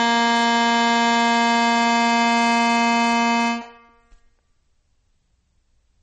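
A short music clip, around 6 s, with a hard ceiling throughout: nothing is present above 8.5 kHz, and the top end sounds dull. The likely cause is low-bitrate audio saved at a high bitrate. The band limit fits an MP3 first encoded at around 32 kbit/s, then re-encoded at a high rate such as 256 kbit/s. The second pass adds file size but cannot restore the content the first pass discarded.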